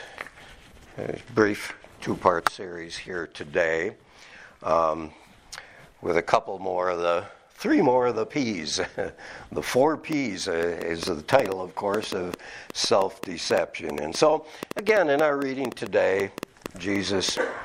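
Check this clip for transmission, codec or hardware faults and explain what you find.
There is one fault. From 10.13 s to 17.38 s, likely interference or a struggling interface injects a train of clicks: about forty similar pops, irregularly spaced at roughly 5.2 per second, standing around 15 dB above the sound.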